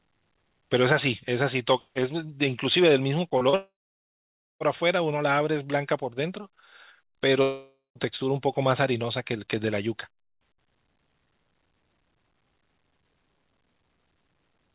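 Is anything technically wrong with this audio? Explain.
Yes. There are two kinds of fault, heard over a band that stops at 4 kHz, which fits a G.711 A-law call path at 64 kbps.

Short concealed packet loss occurs twice, from 3.38 to 3.44 s and from 3.50 to 3.56 s. Each time, about 30 ms of the call reached the decoder too late. The receiver patched each gap by extending the preceding sound for roughly 26 to 30 ms, then blended back into the real signal. Both patches come out as a brief smear or wobble in the speech.

Long network dropout follows directly, from 3.56 to 4.63 s, and again from 7.42 to 7.98 s. The likely cause is a network stall that let no packets through. In the first gap about 1.05 s was lost. The receiver stretched the last sound into a fading buzz or hiss, and about 0.89 s of silence followed. In the second gap about 0.54 s went missing, with a longer fade and about 0.16 s of silence. 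Each time the speech resumes further on, and the lost section is gone.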